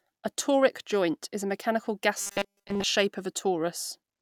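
At 2.18 s, right after "joint is a mechanical", the speech turns into robotic sound from repeated short buffers that lasts until 2.84 s. Over this stretch the sound becomes a rigid, metallic buzz at 200 Hz that still loosely follows the speech. The likely cause is new audio arriving too seldom, so the playback loops a 5 ms slice for most of the interval and discards the real audio it should have played.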